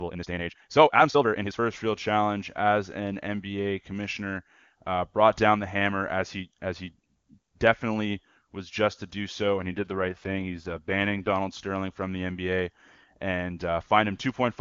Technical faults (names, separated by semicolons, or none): time-stretched section; AMR rate drop